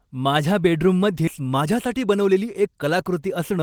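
At 1.27 to 1.29 s a skip ahead occurs: roughly 0.7 s of speech was dropped and playback jumps straight to later audio with no fill. The waveform shows an abrupt splice, and the spectrogram a hard vertical seam where formant tracks break discontinuously.

From 1.39 to 2.84 s a jitter buffer speed-up follows as the buffer drains excess delay, trimming around 0.15 s in short pitch-period pieces. Speech runs at 109% speed with unchanged pitch, sounding hurried. Harmonics stay level while syllables appear compressed in time.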